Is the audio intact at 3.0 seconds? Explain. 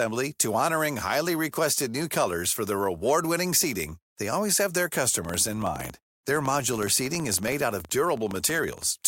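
Yes, the speech at 3.0 seconds is intact, with no audible fault at that moment.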